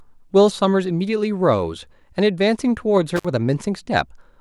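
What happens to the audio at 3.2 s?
At about 3.16 to 3.25 s the speech suffers an intermittent contact: a loose connection opens for roughly 54 ms, so the sound cuts out with crackle at both edges and faint hiss while open, unlike a clean digital dropout's silent gap.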